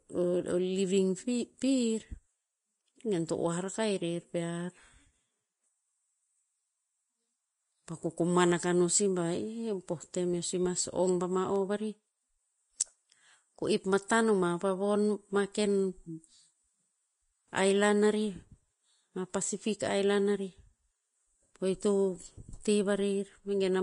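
From start to finish the speech sounds hissy and grainy, with blurred attacks and nothing above 10.6 kHz. The likely cause is Vorbis compression at a low bitrate, around 31 kbps, which quantises the treble so coarsely that fine detail turns into noise.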